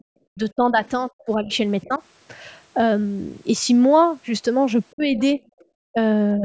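Speech suppressed in double talk from 0.0 to 1.5 s: the talker's speech dips sharply, by as much as about 40 dB, for roughly a second in pieces, likely because the echo canceller could not tell the talker's speech from the far-end echo and turned both down. Other side's voice leaking through at 0.85 s and again from 1.2 to 1.99 s: faint scraps of a second voice, about 35 dB and then about 30 dB below the talker, likely residual loudspeaker echo the canceller missed. Suppression returns from 1.83 to 2.01 s, a shallower dip of about 15 dB, then from 4.92 to 5.4 s at about 30 dB. Leakage overlaps it from 5.0 to 5.65 s, now louder at about 20 dB below the speech. Further brief clipped dips follow at 5.92 to 5.98 s, about 30 dB, and 6.38 s to the end, about 10 dB.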